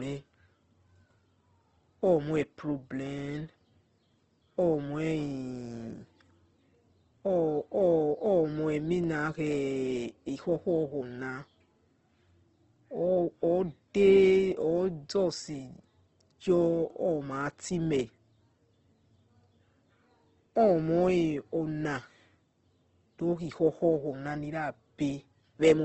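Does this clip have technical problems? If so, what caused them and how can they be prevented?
Yes. Opus compression is heard throughout. The speech sounds rough and grainy, with nothing above 8.2 kHz, which fits a low bitrate around 16 kbps in music (CELT) mode, likely filling starved bands with folded or noise-like content. Prevent it by encoding at a higher bitrate.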